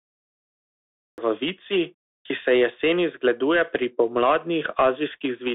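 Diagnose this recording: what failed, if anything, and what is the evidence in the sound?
Codec stage: the Bluetooth CVSD headset codec confines speech to 300 Hz to 3.6 kHz, with granular hiss and scratchy s sounds from one-bit delta steps, unlike clean telephone band-limiting.

Capture or stream start: a cut-off start, with digital silence until 1.18 s, then speech enters mid-sound with no attack, unlike a noise gate opening on a sound's natural onset.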